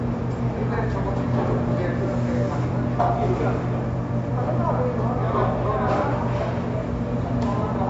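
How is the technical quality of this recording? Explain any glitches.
The quality takes a clear hit from MP3 compression across the whole clip. Nothing comes through above about 7.6 kHz, so the top end sounds dull, and there's a watery, swirly texture where weak frequency lines flicker in and out from frame to frame. Bright, noisy parts pick up a metallic chirp and sharp onsets get smeared. That pattern is likely a starved encoder, and the damage level fits a bitrate somewhere around 48 kbps.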